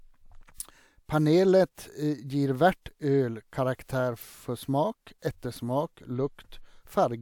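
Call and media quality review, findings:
No audible faults found in the speech path; nothing to raise against any component.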